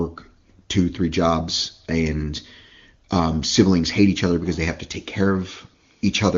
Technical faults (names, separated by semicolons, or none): none